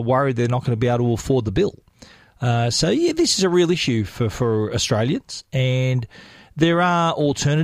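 Nothing in this recording of speech stands out as a technical fault; the audio just runs its course with no dropouts, glitches or other trouble to point to.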